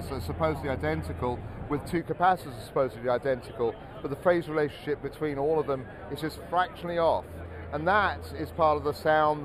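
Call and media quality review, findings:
Dull, slightly hollow top end throughout, highs thinned as if filtered. Channel delay (comb filtering): one channel lags by a few samples, under a tenth of a millisecond, then mono summing cancels evenly spaced frequencies, first notch near 7 kHz. Check stereo alignment before downmix.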